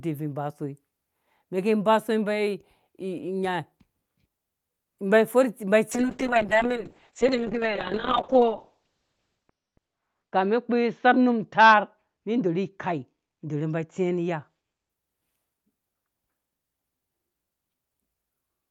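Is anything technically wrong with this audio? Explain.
Yes. From 5.93 to 14.95 s there is a call bitrate drop. The encoder was forced far down, which fits a fall from 48 to about 6 kbps, bottoming out for roughly 3.2 s. The speech turns coarse and muffled, and the spectrogram's top edge collapses from 20 kHz to 6 kHz.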